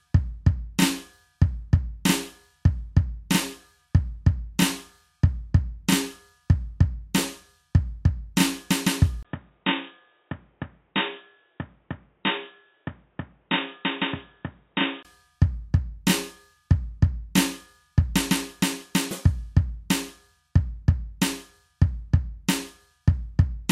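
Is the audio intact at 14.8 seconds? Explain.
No. From 9.23 to 15.05 s the music turns dull and boxy, with nothing above 3.8 kHz. It is a few decibels quieter, with new background noise far below it. A 20 ms gap marks the change. The input likely switched to a poorer device.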